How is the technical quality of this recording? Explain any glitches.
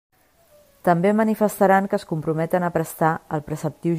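Nothing in this speech recording stands out as a glitch, so there's really nothing technical to flag here.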